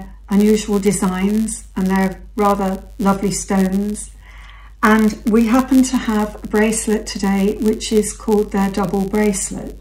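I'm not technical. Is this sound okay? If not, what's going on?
No. A block size mismatch (padded) runs throughout. Tiny silent gaps fill each chunk, causing a steady buzz near 100 Hz and slightly slower playback.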